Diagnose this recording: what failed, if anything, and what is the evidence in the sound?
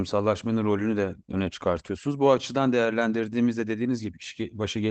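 At the network stage, packets were lost and the decoder rebuilt them from the in-band forward error correction copies carried by the following packets. The rebuilt stretch runs from about 1.75 to 1.89 s, just after "rolünü de öne", and covers 80 ms of audio, which fits four separate 20 ms Opus packets. There is no gap, but that stretch sounds rougher and noisier than the speech around it because the redundant copies are coded at a much lower bitrate.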